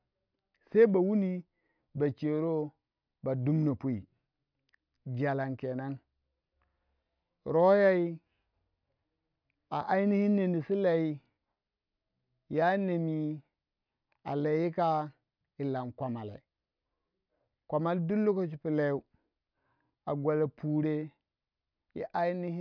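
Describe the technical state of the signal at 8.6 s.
At 8.6 s the speech signal is intact, with no audible fault at that moment.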